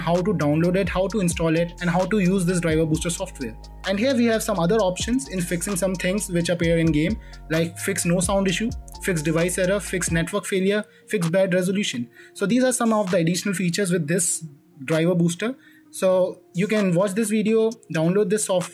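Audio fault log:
Nothing stood out as a problem on listening.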